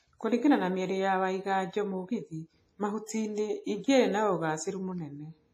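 Throughout the speech, a coarse transform codec, likely WMA compression at a low bitrate near 24 kbps, has quantised the signal heavily. Content stops at 15.4 kHz, and the voice has a ringing, washy quality with a hiss that swells and fades along with it.

From 3.06 to 3.09 s, the codec's block spread quantisation noise about 25 ms ahead of a sharp attack, causing pre-echo. A brief hiss arrives just before the onset, and the attack itself sounds softened and smeared rather than crisp.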